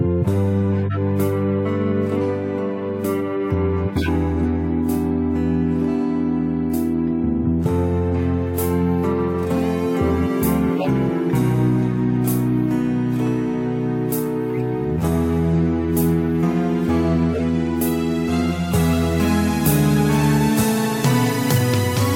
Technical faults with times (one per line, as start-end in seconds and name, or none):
0.86-0.97 corrupt frame decoded
3.98-4.09 corrupt frame decoded
8.18-22.15 pre-emphasis left on
10.76-10.87 corrupt frame decoded
17.33-17.43 corrupt frame decoded